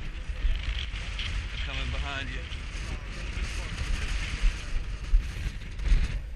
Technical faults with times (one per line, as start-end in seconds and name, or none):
0.85-0.93 one channel drops out
5.47-5.79 one channel drops out